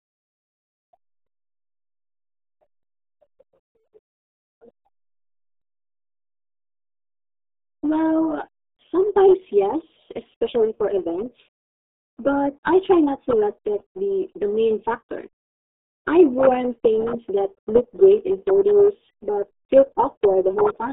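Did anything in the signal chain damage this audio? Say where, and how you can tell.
Yes. RealAudio 14.4 codec damage runs through the whole clip, at the codec stage. The speech is band-limited to roughly 250 Hz to 3.6 kHz, with nothing above 3.8 kHz, and sounds muffled and gargly. That heavy coding damage fits an 8 kbit/s dial-up speech codec discarding most spectral detail.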